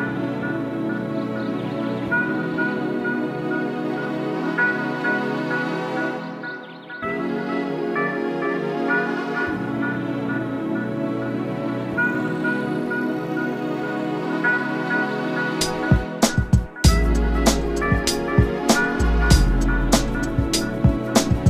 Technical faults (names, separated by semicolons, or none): none